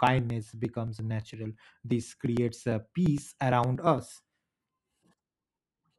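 From 0.07 to 5.94 s, periodic USB or driver dropouts skip roughly 10 ms of speech every 0.115 s, giving about fifty evenly spaced ticks.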